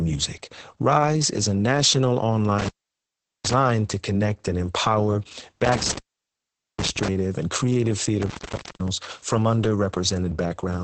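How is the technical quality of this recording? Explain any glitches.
The technical quality is poor. The whole clip is heavily compressed, and the signal drops out three times.

Opus voice compression runs throughout. There is nothing above about 9 kHz, so the speech sounds muffled and dull. The SILK speech coder is working at a very low rate, which fits a bitrate near 10 kbps. It models the voice with coarse linear prediction, so the excitation detail is lost. The result is hoarse, slightly robotic speech with heavy coding damage.

Intermittent contact causes three dropouts. The first runs from 2.59 to 3.53 s, after "is a national". The second runs from 5.65 to 7.08 s, ending before "and creative". The third runs from 8.22 to 8.88 s, after "and creative". A loose cable or plug briefly opens the line. The sound cuts out with crackle at each edge. Only faint hiss remains during gaps of about 0.76 s, 0.81 s and 0.50 s.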